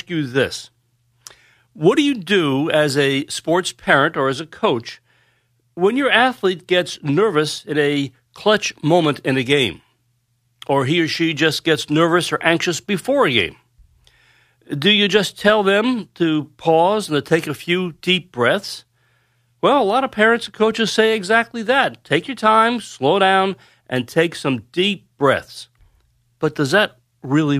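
Speech recording with no audible technical faults.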